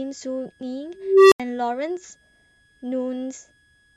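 A switching supply whistle runs through the whole speech clip. It sits high, between 1.66 and 1.69 kHz, well below the speech in level. The supply is cycling at an audible rate. Its pitch wanders slightly within that band.

At 0.96 s an unstable filter takes over. A low tone near 400 Hz swells for about 0.35 s until it clips. The recursive filter's output has run away and overflowed. Sound then drops out for about 80 ms, ending at 1.40 s.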